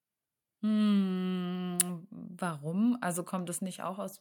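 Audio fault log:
No faults found in the speech recording.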